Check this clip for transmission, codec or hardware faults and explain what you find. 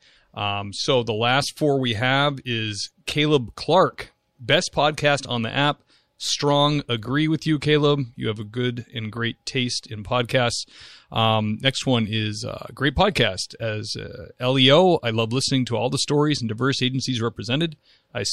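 No faults turn up anywhere in the recording. There is nothing at any point in the speech that needs to be singled out.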